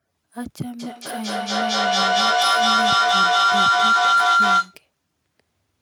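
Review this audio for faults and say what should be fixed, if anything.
Feedback howl runs from 0.79 to 4.82 s. A tone near 1.5 kHz builds to about 14 dB above the speech and pulses roughly every fifth of a second, because a microphone-to-loudspeaker loop keeps regaining level on each trip. To prevent it, mute one device or use headphones when two devices share a room.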